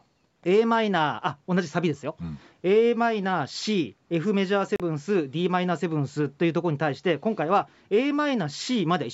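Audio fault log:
4.76–4.80 s, Bluetooth dropout: the speech cuts to silence for about 37 ms, then resumes mid-flow as though it had kept running underneath, so a sliver of sound is missing rather than delayed. This is likely a wireless link failing to deliver audio to the headphones in time, with the late data discarded; a gap this size fits two lost packets. The call-style band limit at 8 kHz is unaffected.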